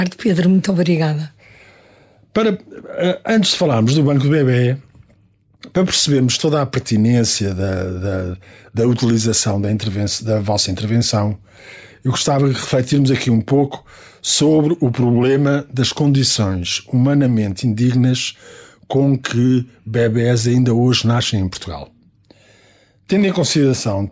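Throughout the clip there is gain pumping: the level ducks by roughly 5 dB under each loud sound. The likely cause is gain set far too high, with a fast limiter clamping it. On the waveform, peaks look flattened and quiet stretches bulge upward; the spectrogram shows nothing above 8 kHz from the call's microphone processing.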